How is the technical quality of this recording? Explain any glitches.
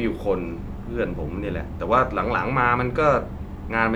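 Nothing here sounds like a glitch; it's just a short bit of speech with no dropouts, clicks or other faults to point to.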